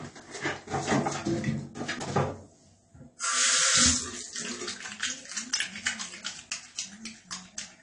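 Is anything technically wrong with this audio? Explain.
Yes. AAC compression runs throughout the clip and is plainly audible. The sound is most likely the result of AAC-LC encoding at a low bitrate, consistent with about 32 kbps. At that rate the encoder spends its few bits on the most audible frequency regions. It discards everything above about 10 kHz, which leaves the top end dull. It also coarsely quantises or drops weaker bands, smearing the detail and giving sustained and hissy parts a warbling, fizzy edge.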